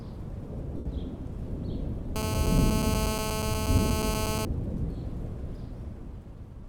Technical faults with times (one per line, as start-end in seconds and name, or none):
0.77-0.86 lost LE Audio frames
2.16-4.45 GSM phone buzz